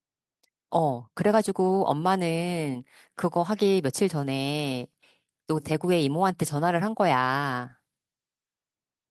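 Nothing in this speech recording points to a technical fault. There are no events to place in time order at any point in the audio.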